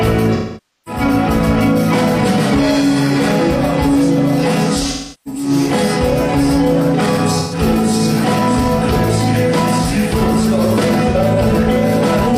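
AAC frames went missing at four points, and each time the decoder concealed the gap by rebuilding audio from the last good spectrum. About 0.35 to 1.01 s, roughly half a second is lost and the sound smears, then sinks toward silence before fading back. Near 4.91 to 5.49 s, losses scattered over about 430 ms, the longest run around 300 ms, give a noisy, phasey stretch. Shorter smeared patches follow at 7.39 to 7.59 s and 11.1 s.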